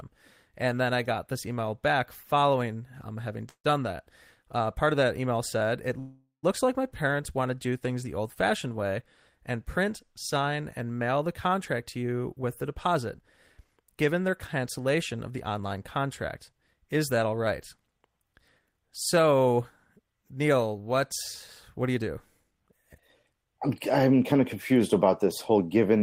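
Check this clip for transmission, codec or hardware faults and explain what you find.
The speech has two transmission faults, each occurring twice.

Call audio freeze at 3.49–3.66 s, after "back following um having", and at 5.99–6.45 s, before "like my". The likely cause is delayed packets draining the jitter buffer. The last sound is extended as a fading buzz, with about 70 ms and 120 ms of silence. The speech then resumes intact, now 149 ms and 437 ms later.

Jitter buffer speed-up at 11.97–17.89 s and 21.82–23.46 s, the second just before "I'm I'm kind of". An overfull buffer was trimmed by cutting repeated pitch-period slices, about 0.4 s and about a tenth of a second in total. The speech plays at 107% speed without any pitch change and sounds hurried.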